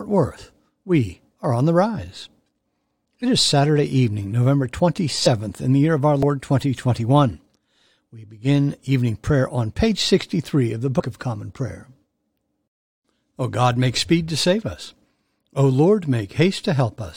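Brief glitches interrupt the speech at 5.25 s, just before "in the year of", at 6.23 s, right after "the year of our", and from 10.99 to 11.01 s, after "of the". Each time the speech lurches forward by about a twentieth of a second. These are compressed frames skipped. Whole frames of the encoded audio were lost or rejected by the decoder.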